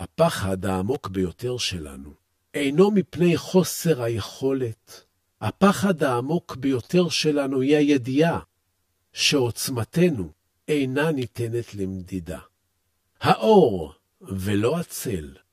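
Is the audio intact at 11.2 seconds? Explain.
No. At 11.22 s there is an electrical switching spike, a sharp snap lasting only a couple of milliseconds and laid on top of the speech rather than replacing it. The click is consistent with a nearby switch, motor or static discharge arcing and the audio line picking up that burst, likely the cause here.

That moment also carries the channel delay (comb filtering) present through the whole clip. One channel trails the other by around 10 ms, and when the two are summed to mono, the shared content cancels at evenly spaced frequencies, the first notch near 50 Hz and further ones at regular intervals above it. The result is a fixed hollow, phasey coloration on the speech at 11.2 s, just as everywhere else in the clip.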